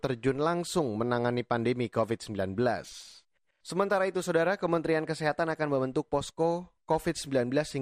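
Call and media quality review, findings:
Dull, band-limited speech throughout, with gurgling, granular distortion. Likely MP2 compression: upper sub-bands starved of bits and switched off, flickering in and out, remaining bands coarsely quantised. Damage plainly audible. Fits an encode around 80 kbps.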